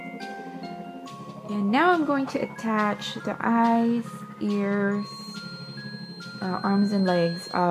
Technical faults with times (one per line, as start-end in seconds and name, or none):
4.93-7.70 feedback whistle